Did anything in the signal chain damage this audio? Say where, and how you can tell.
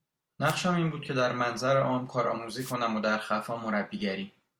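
Yes, at the wireless link ahead of the converter: two wireless microphone noise hits, from 0.44 to 0.56 s and from 2.58 to 2.75 s. Each is a brief swish of static laid over the speech, about a tenth of a second to under two tenths long. The analogue FM radio signal faded as reflected paths cancelled, letting receiver noise surge up. On a spectrogram each shows as a broadband vertical smear; on the waveform, a fuzzy noise patch.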